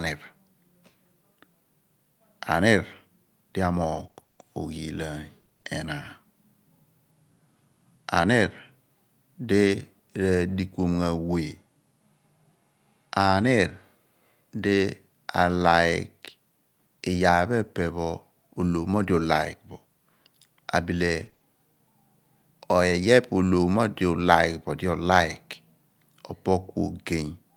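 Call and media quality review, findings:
Repeated packet loss (robotic sound), 3.95–5.67 s: choppy, robotic speech with pieces missing. Likely jitter buffer/PLC. 14 separate gaps, each at most 20 ms, totalling 280 ms, about 16% of the stretch, patched by extending prior sound. Recurring holes, not one dropout.

Repeated packet loss, 21.21–21.41 s: brief robotic stutter. Likely same jitter buffer/PLC path. 3 gaps of up to 20 ms, 60 ms total, 30% of the span concealed. Dense, short burst. Repeated filler gives the buzzy texture.

Lost packet rebuilt from error correction, 9.67–9.69 s: one 20 ms frame briefly rougher, noisier. Opus in-band FEC. The next packet carried a low-bitrate copy, which the decoder played. No gap or stutter, unlike the concealed stretches. Only a momentary grainy texture.

Lost packet rebuilt from error correction, 18.81–18.87 s: two packets, 40 ms, sound coarser and noisier. 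Opus in-band FEC, decoded from the low-bitrate redundant copies. Continuous audio with no chop, which separates it from the robotic PLC bursts.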